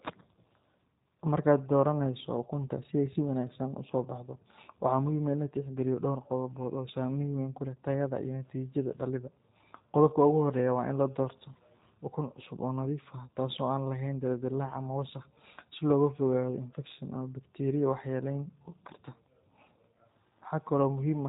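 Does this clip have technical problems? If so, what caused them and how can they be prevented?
Yes. G.729 codec damage runs throughout: speech is rebuilt from a vocal tract filter, pitch predictor and sparse pulses, sounding rough and synthetic, nothing above 3.8 kHz, fitting an 8 kbit/s stream. Prevent it by using a wideband codec such as Opus or G.722 at a higher bitrate.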